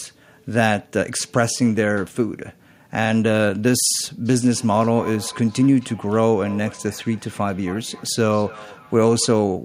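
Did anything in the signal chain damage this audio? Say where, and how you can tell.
Yes, at the call-processing stage. From 4.25 to 9.38 s, feedback echo between two devices repeats the speech about every third of a second, at about 20 dB down.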